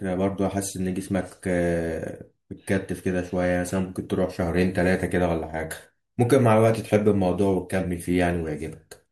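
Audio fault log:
No faults detected in this speech recording.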